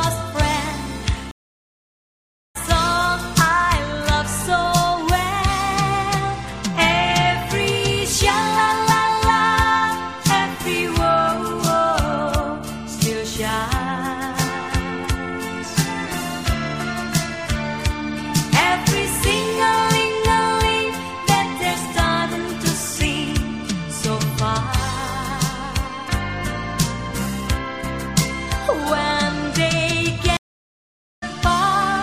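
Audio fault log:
1.31–2.57 s and 30.37–31.24 s, stream reconnect: the sound stops dead for 1.24 s and then 0.85 s, and each time it resumes roughly 0.7 s further on than where it left off. The connection dropped, the player waited, reconnected and started a new decoder partway into a live stream, so the missed material is simply gone. Unlike a brief dropout or buffer underrun, the gap is long, the timeline jumps forward rather than continuing, and the return starts afresh from a cold decoder instead of picking up seamlessly.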